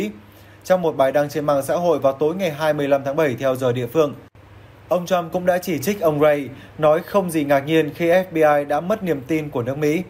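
Nothing in the audio stands out as a technical fault at any point, so there's nothing here to flag.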